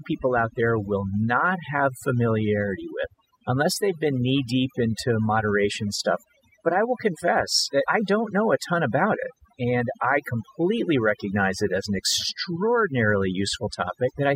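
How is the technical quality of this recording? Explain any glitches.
The recording suffers from overdone noise removal throughout. A noise reducer was set too aggressively. It pushes frequency bands near its noise estimate far down, taking quiet parts of the voice too. Pauses fall to near silence with twinkling specks.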